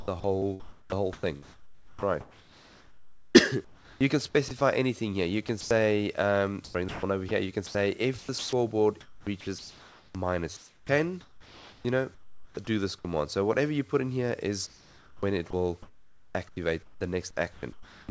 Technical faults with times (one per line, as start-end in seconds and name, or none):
0.00-4.61 sound chopped by the voice detector
5.47-5.71 sound chopped by the voice detector
6.65-13.05 sound chopped by the voice detector
14.67-17.01 sound chopped by the voice detector
17.53-18.09 sound chopped by the voice detector